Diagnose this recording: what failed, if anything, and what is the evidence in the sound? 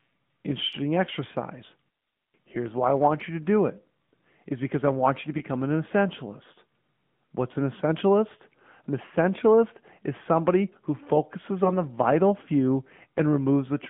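The speech is confined to a narrow band, roughly 150 Hz to 3.6 kHz, with nothing above it, and it has a buzzy, synthetic edge throughout. This is the AMR narrowband mobile codec at work, at the codec stage. AMR-NB samples at 8 kHz and rebuilds the voice from a vocal-tract model excited by a few pulses per subframe. The plainly audible coarseness fits a mid-range mode of around 10.2 kbps.

At two points the speech briefly dips and warbles. The first is between 5.38 and 5.45 s, just after "I want you to" and before "an essentialist". The second is between 11.64 and 11.72 s, after "is somebody who focuses" and before "the vital few". These are lost AMR speech frames, a network or radio-path fault. Each gap fits one dropped 20 ms frame. The decoder covered the gap by repeating the last good pitch and vocal-tract settings at reduced gain, which produces the short smear.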